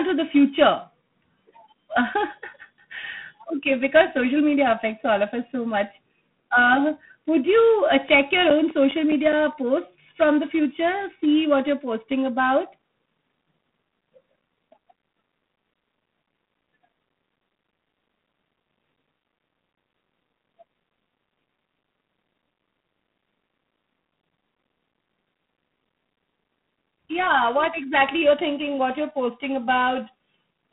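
G.726 ADPCM coding runs through the whole speech recording: a rasping hiss rides on the voice's level and the band stops at about 3.9 kHz, which fits the 24 kbit/s rate. CD scratch ticks come from 8.09 to 9.53 s and again from 15.86 to 18.12 s, about five a second, each lasting up to roughly 10 ms. They are concealed read errors recurring once per disc revolution.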